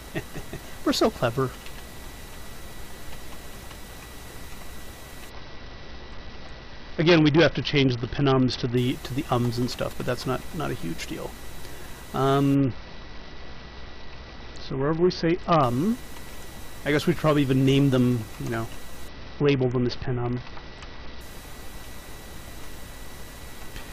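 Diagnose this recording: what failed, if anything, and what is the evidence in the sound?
The failure is at the codec stage of a Bluetooth link: a Bluetooth SBC bit pool drop, heard three times, from 5.29 to 8.77 s, 12.55 to 15.63 s and 19.08 to 21.21 s. In each span the treble dulls and a gritty noise rises, then clears when full quality returns. That fits the encoder cutting its bit pool from about 31 to 7, roughly 61 kbps, so the top sub-bands lose their bits and the rest are coarsely quantised.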